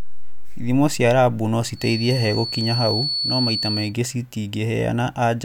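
From 1.73 s to 3.95 s, just after "cia rabu no", a feedback whistle sits behind the speech. It is a thin, steady tone near 4.4 kHz, a few decibels below the speech itself. Its level swells and fades slowly but never builds or runs away. The likely cause is a loudspeaker-to-microphone loop hovering at the edge of feedback. That loop would let one high frequency keep ringing without growing into a howl.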